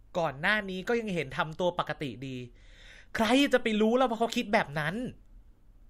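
Speech, with one fault. At 4.33 to 4.36 s a corrupt frame is decoded and played. It sounds like a short chirp or blip of about 20 ms. That is roughly one compressed frame. Some of that frame's bits were flipped in transit or storage. The decoder did not reject it and rebuilt audio from bad data. Misread gains and codes put energy at the wrong frequencies. The burst is quiet, peaking at about -30 dBFS.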